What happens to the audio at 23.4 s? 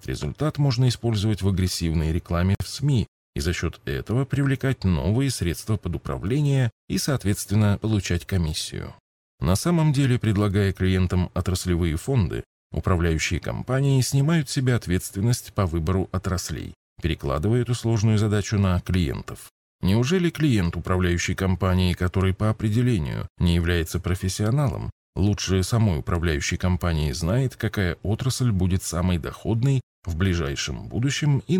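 Nothing goes wrong at 23.4 s: the speech carries on intact through that moment, with no dropout, click, distortion or other fault to be heard.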